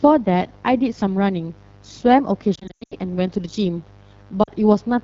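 A short speech recording carries a steady, raspy mains buzz about 25 dB below the speech. Its switching-spike harmonics of 50 Hz reach into the kilohertz range, which sets it apart from a smooth, pure hum. The AMR wideband (HD Voice) codec leaves the speech rough and grainy, with a noise-filled top band rather than a clean treble cut, which fits one of the lowest AMR-WB rates. Lost AMR speech frames scatter across 2.55 to 2.94 s, with the sound dropping quickly into near-silence for up to 0.1 s at a time before returning rough. A shorter dropout at 4.43 to 4.50 s covers about two frames. These decoder concealment fades are softer than the hard clicks of plain packet gaps.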